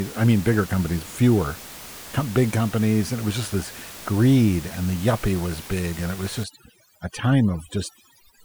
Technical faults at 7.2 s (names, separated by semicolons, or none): overdone noise removal